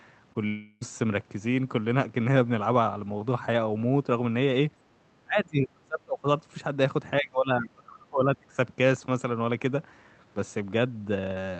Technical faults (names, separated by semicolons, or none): short concealed packet loss; long network dropout; speech suppressed in double talk